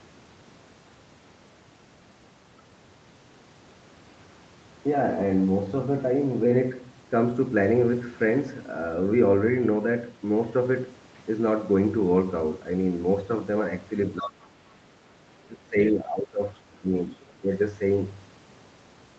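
From 14.18 to 14.97 s the speech drops sharply, by around 30 dB at its deepest. This is speech suppressed in double talk. The echo canceller likely mistook overlapping talk for echo and turned everything down. The drops return at 15.45 to 15.76 s, 15.92 to 16.58 s, 16.79 to 17.09 s and 17.34 to 17.51 s, each shallower, easing to about 10 dB.

Around these gaps, the other side's voice is leaking through. Brief scraps of a second voice appear at 14.23 to 14.29 s, about 15 dB under the speech, and at 15.88 to 15.93 s, about 20 dB under. From 16.55 to 16.76 s it sits about 40 dB under. Loudspeaker echo was likely not fully removed from the microphone.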